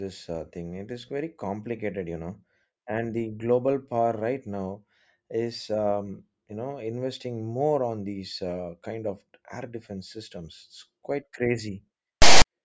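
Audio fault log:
12.22–12.45 s, file tags played as audio: a harsh, lopsided rasp starts abruptly, then drops to silence. Text tags and zero padding were decoded as samples.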